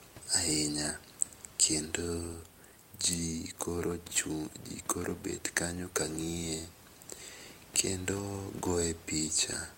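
No technical faults can be heard anywhere in the speech; the only other sound is the room's own background noise, sitting about 26 dB below the speech as part of the original recording.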